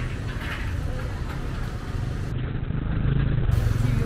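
At 2.32 s a call bitrate drop sets in and lasts until about 3.57 s. The sound turns rough and watery, and loses its top end. The encoder was forced down from 64 kbps to just 6 kbps and stays near that floor for about 1.16 s. At so few bits, it codes coarsely and trims the audio band from 20 kHz to 4 kHz. The dull, muffled quality lifts only as the bitrate recovers.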